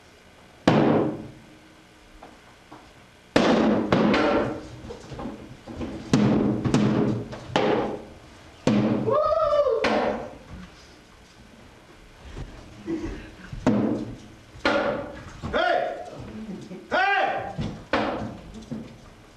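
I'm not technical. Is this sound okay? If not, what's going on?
Yes, this sound is okay; nothing is going wrong in it.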